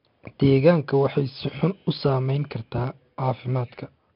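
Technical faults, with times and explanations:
Throughout, 4-bit ADPCM compression: each sample is coded as a coarse 4-bit step from a predicted value, so the speech carries a gritty hiss that rises and falls with its loudness, heavy here, and sharp onsets smear because the adaptive step lags behind sudden jumps. Nothing is heard above 5.3 kHz, which fits a sample rate near 11 kHz and a bitrate around 44 kbps, and this leaves the speech dull as well as rough.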